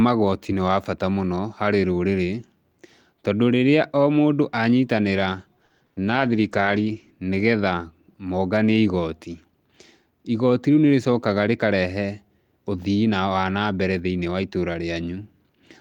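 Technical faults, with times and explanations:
5.65–5.98 s, repeated packet loss (robotic sound): after "rĩrĩa o mũndũ anyitanĩra", four gaps up to 50 ms are patched by extending prior sound, giving choppy texture; the spectrogram shows smeared, repeated frames.
6.06–7.18 s, call bitrate drop: coding falls from 32 to 13 kbps, roughening and muffling the sound before "nĩ getha monganie igoti"; the spectrogram's upper frequencies go visibly empty.
10.50–10.91 s, jitter buffer speed-up: about 50 ms of pitch periods are cut to drain the buffer, so the audio runs at 111% with unchanged pitch; the waveform shows whole cycles removed.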